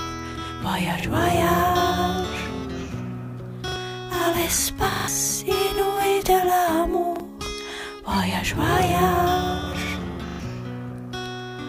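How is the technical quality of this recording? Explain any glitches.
Playback is marred by a repeated buffer fault at 1.0, 3.68, 4.92, 7.16 and 10.28 s. When new audio arrived late, the device replayed its last block, consistent with a 40 ms buffer. Each stutter repeats one to four times with hard joins and skips roughly 40 to 150 ms of sound.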